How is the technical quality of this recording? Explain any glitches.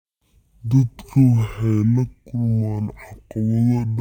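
Poor: throughout, the speech suffers from stereo read as mono. Interleaved left and right samples are played consecutively as one channel, giving half speed, a drop of one octave, and a faint mirrored image up high.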